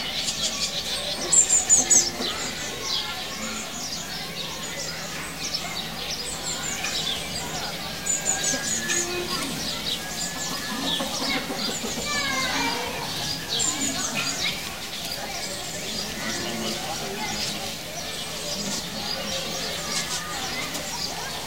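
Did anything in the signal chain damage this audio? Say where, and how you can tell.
Yes. There's a stuck bit running through the whole clip, and the damage most likely happened at the converter or on one of its data lines. About half the samples are shifted by a fixed step of roughly -40 dBFS, in a pattern that follows the waveform, so you hear distortion riding on the sound. Because that bit also flips with the sign of small values, the quiet gaps don't go quiet. They fill with noise at about that step level.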